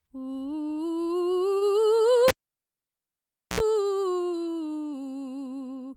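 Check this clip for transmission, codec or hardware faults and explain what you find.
Two faults are present in this music clip: a transmission stall and a physical connection fault.

From 1.57 to 1.64 s there is a short stall from a late packet. The jitter buffer ran dry, so the receiver held the last sound for 38 ms until data arrived, then resumed where it left off. No music is lost, but everything after plays 38 ms later.

From 2.28 to 3.60 s the cable is pulled and plugged in. A pop marks the disconnect, followed by about 1.27 s of near silence. While only the tip touches, there is a 68 ms burst of 60 Hz mains buzz, and a second pop brings the signal back.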